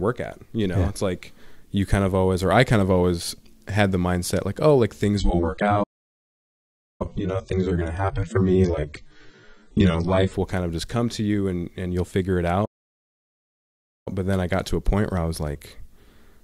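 Right after "mindset like oh like", at 5.17 s, the quality suddenly drops with no gap, with a swirly, smeared texture. That's an adaptive stream at a lower bitrate, sounding like a fall from a clean AAC stream to roughly 16 kbit/s. It recovers at 10.34 s, just before "will kind of just". Inside that stretch, from 5.83 s to 7.02 s, the sound cuts out for about 1.2 s. That's a playback stall, likely the player running dry on data. A second stall follows "and you'll figure it", a 1.4 s silence from 12.65 s to 14.08 s.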